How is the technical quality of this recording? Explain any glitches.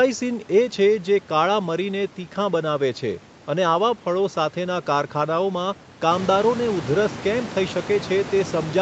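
No glitches to report here; the speech comes through steady and intact, and the only change is the room's background noise stepping up by about 13 dB around 6 s, which belongs to the recording space rather than to any fault.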